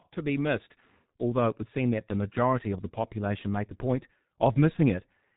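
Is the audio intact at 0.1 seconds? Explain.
No. At 0.1 s, as throughout, G.723.1 codec damage is heavy: nothing passes above 3.8 kHz, and the slow, frame-based voice model, fitting roughly 6 kbit/s, makes speech muffled and hoarse with smeared consonants, unlike a plain low-pass filter, which would dull the sound without that roughness.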